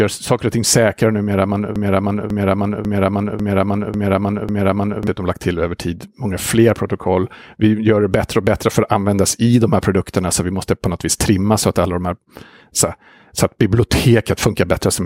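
From 1.76 to 5.07 s a broken-record loop repeats a 0.55 s fragment six times, likely from a stalled stream; the waveform shows identical blocks, and the missing audio is lost. At 2.23 s DAB burbling from a bit-error rate of about 0.15% adds short blips of noise in single sub-bands, visible as isolated sub-band patches flaring on the spectrogram.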